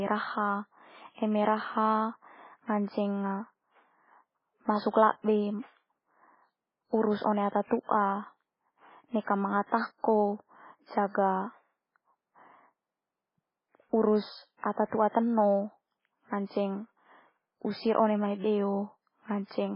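Throughout, the speech is dull above 5.3 kHz and sounds watery and swirly, with smeared attacks: heavy MP3 compression, likely at a very low bitrate around 16 kbps. Unlike simple low-pass filtering, the remaining detail flickers. At 9.21 to 9.27 s and 9.67 to 9.72 s, pre-echo puts a brief hiss of about 55 to 58 ms ahead of sharp onsets. That is codec noise smeared before the attack, not a repeat after it like a true echo.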